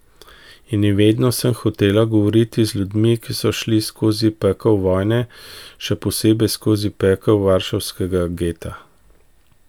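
Nothing in the speech stood out as a technical fault on listening.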